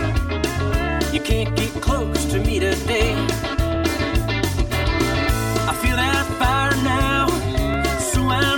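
The whole clip has a hollow, phasey colour from channel delay (comb filtering). One channel runs around 3 ms behind the other, so folding to mono cancels evenly spaced frequencies, with the first notch somewhere near 150 Hz. There are also two small clicks or skips at 3.75 s and 7.74 s. They come from overlap between stream segments: the player trims away about 6 and 15 milliseconds it wrongly treats as duplicated, and the waveform jumps. The roughly 4-second spacing fits 4-second segments.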